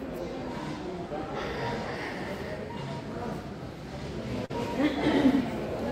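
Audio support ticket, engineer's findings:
Short concealed packet loss at 4.45–4.51 s. Brief smear and wobble in the sound. Probable component: receive-side jitter buffer and decoder concealment. About 40 ms of audio arrived too late or never arrived. The decoder bridged the hole by extending the preceding sound, pitch-continued or noise-shaped, for roughly 41 ms, then crossfaded back into real audio.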